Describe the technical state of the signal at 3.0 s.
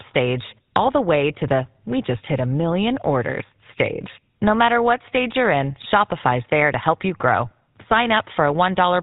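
At 3.0 s the speech is passing through a GSM full-rate codec, as it is for the whole clip. The encoder models the vocal tract and drives that model with a pulse train that keeps only one excitation sample in three, and nothing above 4 kHz gets through, a coarseness that fits the 13 kbps full-rate stream. The result is plainly audible: the speech sounds band-limited and dull, with a buzzy, gravelly roughness.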